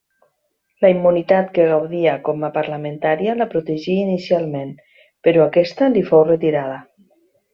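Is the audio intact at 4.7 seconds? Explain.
Yes, at 4.7 seconds the speech is intact, with no dropout, click, distortion or other fault audible at that moment.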